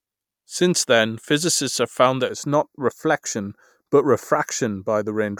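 From 2.29 s to the end, channel delay (comb filtering): one channel lags by a fraction of a millisecond before mono summing, cutting notches from around 3 kHz and leaving the speech hollow and phasey.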